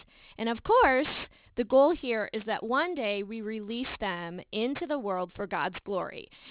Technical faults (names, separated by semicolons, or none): aliasing